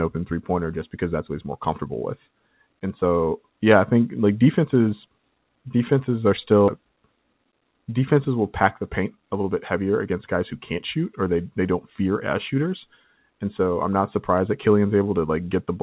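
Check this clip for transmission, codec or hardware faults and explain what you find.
Two faults are audible in this speech, heard through a band that stops at 4 kHz, which fits narrowband G.711 mu-law.

Skip ahead, 6.68 to 6.70 s: about a second of audio never reached playback, either lost in transit or discarded when the jitter buffer overflowed while later audio was already queued. Nothing was inserted to cover the gap, so the speech on either side is butted together and jumps forward abruptly, with a stretch of content simply missing.

Jitter buffer speed-up, 7.23 to 7.61 s and 8.64 to 10.37 s: the buffer was holding more audio than its target, so the receiver trimmed its backlog by repeatedly cutting out short pitch-period-length pieces. The first run plays at 112% and sheds about 50 ms. The second runs at 110% and sheds about 200 ms. Pitch stays put, but the speech sounds rushed through those stretches.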